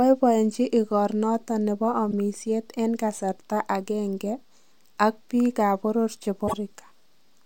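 A speech recording with damaged data in a compressed stream at two points. A short glitch occurs from 2.11 to 2.13 s, and a longer one from 6.44 to 6.54 s. Corrupted bytes there make the decoder misread frames, lose sync and hunt for the next frame header.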